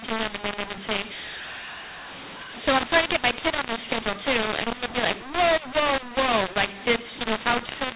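From start to finish the speech carries a mu-law and A-law mix-up: telephone audio encoded as mu-law has been decoded as A-law. Because the two logarithmic curves assign different levels to the same 8-bit codes, amplitudes come out scrambled, some too loud, others too soft, giving a harsh, gritty distortion over every syllable. The quietest samples are pushed well above silence, so the pauses fill with noise. The band stops near 4 kHz, which fits ordinary 8 kHz telephone coding.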